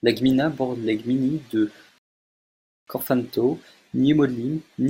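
At 1.98 s a rebuffering stall starves playback: 0.89 s of silence, a blank band on waveform and spectrogram, then speech resumes where it stopped at 2.88 s.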